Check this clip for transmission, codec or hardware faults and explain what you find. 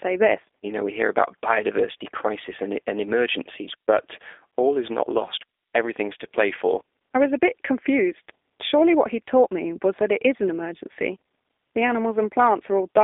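One codec fault runs through the whole speech clip: G.729 coding. The speech is rebuilt from a vocal tract filter, a pitch predictor and a few pulses per frame, which fits a low-rate 8 kbit/s VoIP link. That leaves it plainly rough and synthetic. On a spectrogram, energy sits between roughly 300 Hz and 3.6 kHz, with nothing above 3.7 kHz. Harmonics look smeared and speckled rather than clean.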